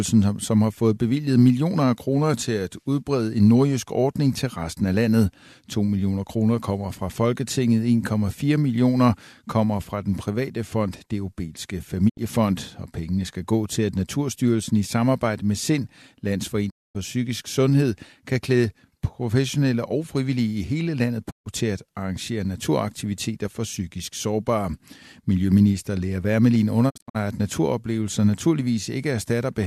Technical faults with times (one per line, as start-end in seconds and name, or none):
12.08-12.19 digital broadcast dropout
16.69-16.97 digital broadcast dropout
21.29-21.48 digital broadcast dropout
26.89-27.17 digital broadcast dropout